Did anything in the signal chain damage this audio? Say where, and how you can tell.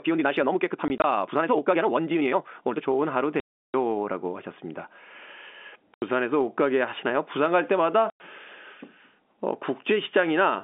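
Yes. From the start to 2.86 s the speech is rushed, running about 1.7 times faster while its pitch stays put. This is likely a time-stretched section: processing before storage or playback squeezed the audio by dropping short pieces.

Packet loss filled with silence in the network stage cuts hard-edged holes: scattered 20 ms gaps totalling 60 ms between 0.88 and 1.04 s, then 340 ms at 3.4 s, 80 ms at 5.94 s and 100 ms at 8.1 s. These multiples fit 20 ms packets, each replaced with silence inside the G.711 call's 250 Hz to 3.5 kHz telephone band.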